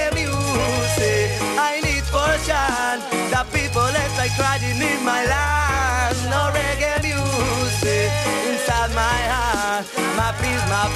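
From 9.20 to 10.61 s a buzz at about 91.5 Hz rides on the sound, which slows very slightly, to 0.996 times normal speed. This is a block size mismatch (padded): short blocks are zero-filled to a longer read size, inserting a brief gap each block.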